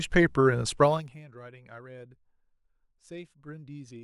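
Zipper noise runs from 0.82 to 1.22 s in this speech clip, a ticking that rides on the sound while its level falls by roughly 20 dB. The gain is being lowered in 1 dB jumps with no smoothing between them, about fifty per second, and each jump puts a small click into the waveform.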